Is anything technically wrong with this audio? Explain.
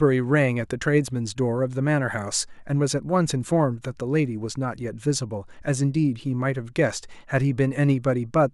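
No, nothing is technically wrong with this audio.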